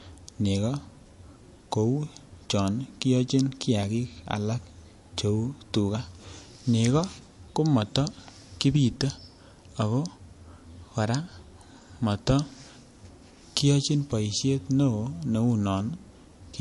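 MP3 compression is audible throughout the speech, from start to finish. The treble stops abruptly at about 11.3 kHz, and the codec damage is plainly audible, which points to a low bitrate of around 48 kbps and is likely the cause. With that few bits, the encoder discards the top band outright and drops weaker frequency components that flicker in and out between frames, producing a thin, watery texture and a dull top end.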